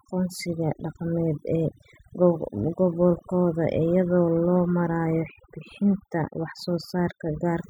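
Speech clip with overdone noise removal throughout: an over-aggressive noise reduction pass strips low-level frequency bands, leaving near-silent gaps flecked with twinkling specks.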